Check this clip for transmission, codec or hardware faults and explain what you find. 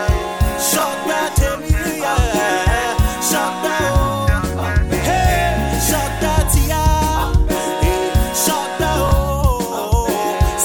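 Two brief chunks out of order, at 0.79–0.83 s and 9.07–9.11 s. In each, one block of about 21 ms arrives a single block late and plays after the block that should follow it. The sound is a tiny jumbled stutter. Unlike a dropout or lost packet, no sound goes missing and there is no silent gap, only a swapped pair of blocks.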